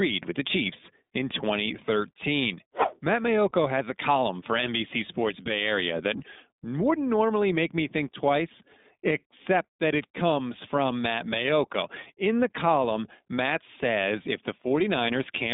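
Throughout, the iLBC codec caps the speech near 3.8 kHz and leaves a rough, synthetic edge that changes in 20 ms frames, which fits the 15.2 kbps mode and sets it apart from plain band-limiting.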